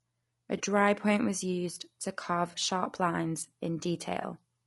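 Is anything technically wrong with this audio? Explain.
Yes. The speech is roughened throughout, with a grainy, noisy quality between the harmonics and a top band that sounds thin and synthetic. This points to low-delay AAC compression, likely AAC-ELD at a low rate, something like 32 kbps. Its short frames resolve pitch harmonics coarsely, and the encoder spends few bits per frame, so noise fills the gaps between harmonics. The highest frequencies are rebuilt rather than coded exactly.

There is also AAC frame loss with concealment, at 0.57 to 0.61 s, 2.51 to 2.55 s and 4.21 to 4.25 s. Each is a brief smeared patch, consistent with one lost frame of about 20 ms. The decoder has no data for that stretch and fills it from the previous good spectrum. Because each gap is short, there is no fade toward silence, just a momentary blur in the sound.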